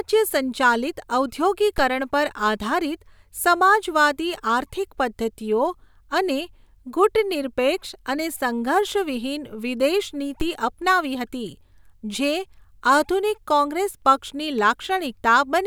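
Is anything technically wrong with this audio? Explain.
Yes. There is a DC step at 1.78 s and again at 10.41 s in this speech recording. At each point the waveform's zero line jumps suddenly by about -17 dBFS, as when an input carrying an offset is switched in. The offset then bleeds away through a roughly 5 Hz high-pass. Each jump is heard as a brief low thump under the speech, while the speech itself continues unchanged.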